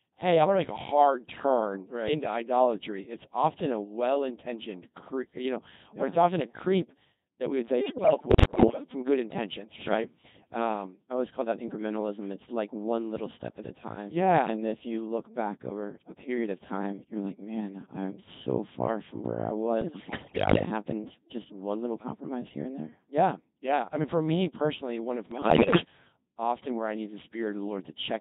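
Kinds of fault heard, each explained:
Codec 2 vocoder: Throughout, the speech is heavily damaged by this low-rate digital-radio vocoder, and the sound points to the 2.4 kbit/s mode. Instead of carrying the waveform, it sends only pitch, voicing, loudness and a coarse spectral outline for each frame, and the decoder rebuilds the voice from a bank of sine waves. That leaves every phrase robotic and buzzy, with the natural texture of the voice replaced by a synthetic hum.
bit errors on digital voice radio: From 7.80 to 8.84 s (after "that we would say", before "from good intentions sure"), from 19.82 to 20.66 s (after "far from where I", before "happened just one little") and from 25.32 to 25.84 s (after "me personally one of", before "often where I need"), corrupted bits reach the decoder at a rate of several percent. Each wrong bit misdirects a frame's pitch, level, voicing or envelope, so the voice lurches in pitch and loudness and breaks into warbling, bleeping gibberish.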